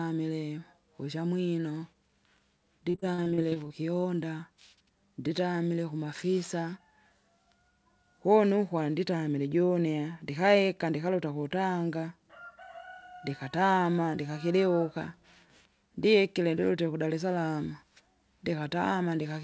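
From 2.90 to 3.72 s the speech breaks up with repeated packet loss, giving a robotic sound. Nine short holes fall in under a second, the longest about 40 ms. Each hole is bridged by stretching the last bit of audio forward. About 240 ms of sound is missing, so roughly 30% of the stretch is patched. The result is choppy and buzzy. The band stops at 8 kHz, which fits a wideband call codec such as G.722.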